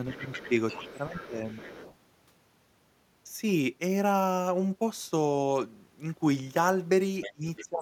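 A second, quieter voice sits under this speech recording from 0.11 to 1.94 s and again from 7.21 to 7.65 s, roughly 15 dB below the main talker. This is the other side's voice leaking through, likely loudspeaker sound reaching the microphone that the echo canceller failed to remove. The main voice also dips by about 10 dB, in fragments, at 0.14–0.52 s and 1.07–1.40 s, and by about 20 dB at 7.33–7.82 s. That is speech suppressed in double talk: with both sides talking, the canceller likely could not separate its own talker from the echo, so it turned both down.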